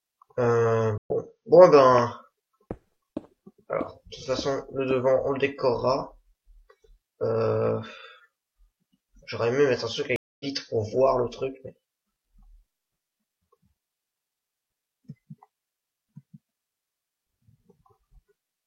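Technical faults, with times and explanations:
0.98–1.11 s and 10.16–10.46 s, stream reconnect: the connection dropped twice, and each time the player went quiet, reconnected and started a fresh decoder partway into the stream. You hear a gap of 80 ms the first time and 238 ms the second. When the sound comes back it has jumped ahead, by about 50 ms after the first gap and about a fifth of a second after the second. That skipped stretch is why it sounds like a jump cut rather than a simple pause.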